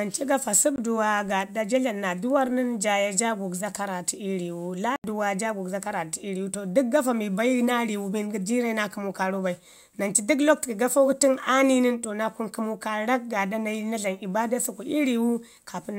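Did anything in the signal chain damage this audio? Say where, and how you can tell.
Yes: blocks of digital silence at 0.76–0.78 s and 4.96–5.04 s, before "jaa gugzo karratu ii". Buffer underruns zeroed 20 and 80 ms, cutting the sound out and back with no fade.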